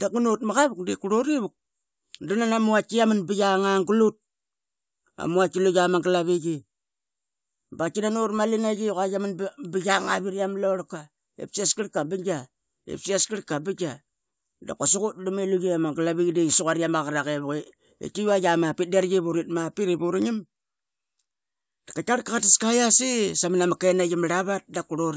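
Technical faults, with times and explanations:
No technical faults can be heard anywhere in the recording.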